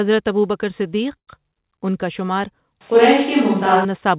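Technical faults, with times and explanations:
1.17 to 1.30 s, call audio freeze: the sound stops for about 100 ms of silence, then picks up where it left off, likely packets stalling and the jitter buffer running dry.
2.81 to 3.85 s, switch to a distant microphone: the speech suddenly turns roomy and thin, with faint background noise and barely any level change, likely the close mic dropping out for a farther one.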